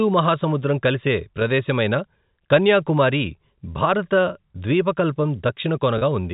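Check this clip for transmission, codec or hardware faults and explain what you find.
Two brief dropouts were concealed by packet loss with pitch repetition. Audio went missing at 1.40 s, just after "మహాసముద్రం కలిసే", and again from 5.98 to 6.01 s. The receiver filled each hole by looping the last pitch period of the speech. The first gap, about 10 ms (consistent with a single lost packet), passes as a faint held buzz. The second, about 30 ms, sustains that buzzy repeat noticeably longer before speech resumes. The G.711 telephone coding path carries the sound without audible damage.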